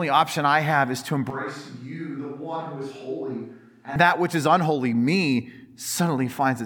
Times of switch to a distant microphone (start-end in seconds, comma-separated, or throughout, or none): 1.30-3.96